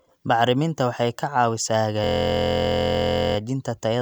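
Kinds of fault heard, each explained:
System hang loop: the driver froze while the sound hardware kept replaying its ring buffer, so from 2.04 to 3.37 s one 23.2 ms slice repeats exactly, dozens of times, making a steady 43.1 Hz buzz, which fits a 1024-sample buffer.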